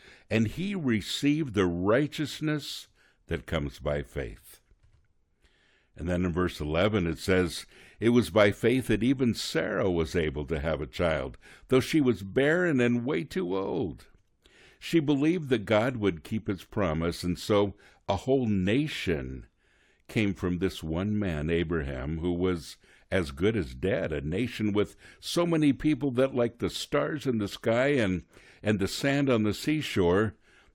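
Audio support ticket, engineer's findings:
No audible faults found on playback; nothing to action.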